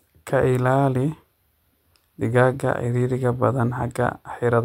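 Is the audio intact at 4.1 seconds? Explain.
Yes, at 4.1 seconds the audio is intact, with no dropout, click, distortion or other fault heard at that point.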